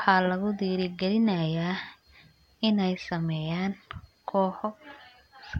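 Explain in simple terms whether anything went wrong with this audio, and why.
Nothing went wrong with this audio, because the speech comes through without any fault a listener can hear.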